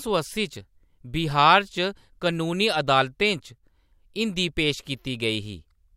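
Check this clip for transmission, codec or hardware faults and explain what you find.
One fault is present. One channel drops out from 3.58 to 3.63 s: the speech abruptly dips by about 6 dB, likely because one stereo channel briefly vanished before the mono sum.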